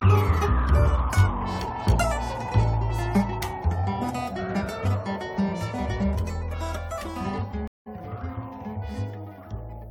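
At 7.68 s the music drops out for 184 ms, a stream reconnect: the connection failed, the player rejoined and restarted its decoder. Playback picks up about a tenth of a second further on, fading in. A waveform shows a flat gap ending in a ramp; a spectrogram shows a blank column.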